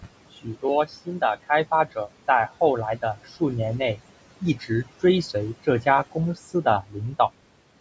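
Speech runs through noise suppressor artifacts from start to finish: the room noise, sitting about 18 dB below the speech, is pulled down by about 18 dB in the pauses and swells back under each phrase. On a spectrogram the background floor pumps up and down in step with the speech. Speech cut by the noise suppressor happens three times, at 0.37 to 0.64 s, 4.41 to 4.86 s and 6.82 to 7.14 s, where the suppressor mistook soft parts of the speech for noise and turned them down by up to about 15, 12 and 13 dB. Each brief stretch sounds swallowed, and the waveform shows sudden dips in level with the quiet speech energy missing from the spectrogram there. The call microphone processing's band limit is visible as empty spectrum above 8 kHz.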